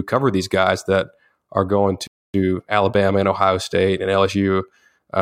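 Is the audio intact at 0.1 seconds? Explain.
Yes, at 0.1 seconds the audio plays through cleanly, with no dropout, click, distortion or other fault at that moment.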